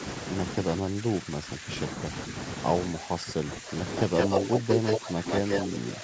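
An echo canceller that likely could not tell its own talker from the far side during double talk turned both down, so the speech is suppressed in double talk, dipping by around 10 dB and losing pieces from 0.63 to 1.7 s and again from 2.87 to 3.76 s. From 3.93 s the loudspeaker side's canceller likely let an echo leak through, returning the voice 168 ms late: a brief scrap at 3.93 to 4.01 s about 10 dB below the speech, then a copy about as loud as the speech from 4.17 to 4.99 s. Suppression returns from 4.39 to 5.26 s, overlapping that echo. A further echo at 5.29 to 5.67 s overlaps the last suppressed stretch, which runs from 5.46 s to the end.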